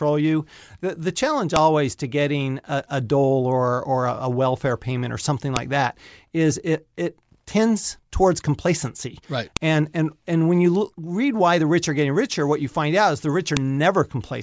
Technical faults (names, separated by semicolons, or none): file header played as audio